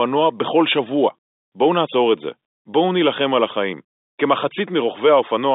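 The speech carries the narrow band of a G.711 mu-law telephone line at 64 kbps, reaching from 250 Hz to 3.7 kHz with nothing above 3.8 kHz, and there are no technical faults.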